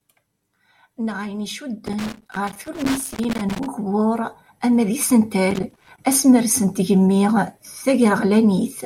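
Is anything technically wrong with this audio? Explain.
Yes. Loose connector crackle appears twice, from 1.86 to 3.66 s and from 5.51 to 5.98 s. A worn or dirty contact is intermittently breaking the signal path, chopping the speech into an irregular scratching burst. On a waveform this shows as jagged dropouts and spikes. On a spectrogram it shows as scattered broadband vertical streaks.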